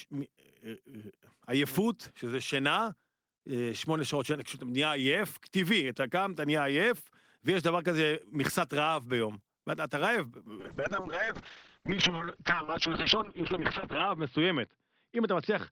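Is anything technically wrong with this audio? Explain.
Yes. From 10.6 s to the end there is a call bitrate drop: the connection's bandwidth estimate collapsed and the encoder was forced onto far fewer bits, consistent with a fall from around 32 kbps to about 6 kbps. At that rate the codec quantises the speech coarsely and narrows its audio band from 20 kHz to 6 kHz. The speech turns muffled and rough, with a watery texture, worst over a stretch of about 2.15 s at the lowest rate.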